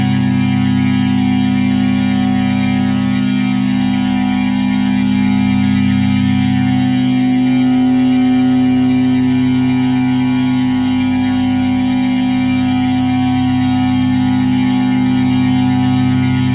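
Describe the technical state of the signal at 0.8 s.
At 0.8 s the sound is intact, with no dropout, click or other fault, only the narrow telephone-band character of the call path, which carries nothing above about 4 kHz.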